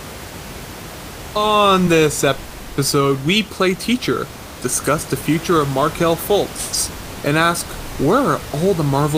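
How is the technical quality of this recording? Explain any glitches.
The technical quality of this recording is good, and there are no glitches to explain.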